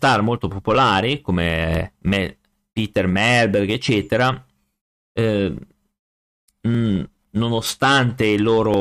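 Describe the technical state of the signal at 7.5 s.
A background task stalling the USB bus or audio driver every 0.999 s causes periodic USB or driver dropouts from 0.75 to 8.74 s, spanning 8.0 s. Each stall skips about a millisecond of speech, heard as an evenly spaced tick.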